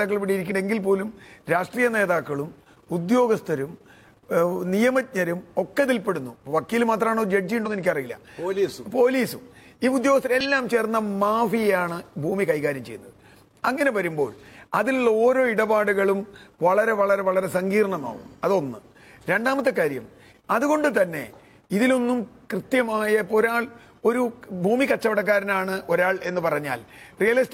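At 0.42 to 0.52 s, 7.62 to 7.68 s and 10.41 to 10.46 s, compressed frames are skipped. Each time, roughly 50 ms of audio is missing because whole frames never reach the output, either lost from the file or rejected by the decoder as damaged. The sound jumps forward by that amount.

Two corrupt-frame errors were decoded later. At 23.26 to 23.31 s, a single damaged frame was played with misread gains or codes. This puts a brief burst of energy at the wrong frequencies, peaking around -30 dBFS. At 26.38 to 26.42 s, a louder error of about -20 dBFS affects several frames together and is heard as a chirp or noise burst.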